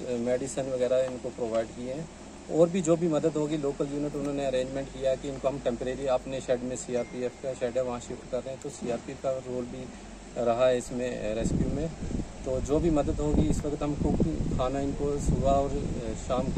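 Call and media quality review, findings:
Nothing to flag on this one; no faults turned up anywhere in the audio, so the ticket can close without findings.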